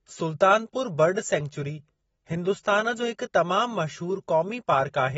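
AAC compression runs throughout this speech clip: nothing sounds above about 7.6 kHz, and the audio is plainly dull and smeared, with a fizzy, warbling edge on sibilants. This is likely AAC-LC coding at a bitrate that fits roughly 27 kbps, which lowers the cut-off and quantises the spectrum coarsely.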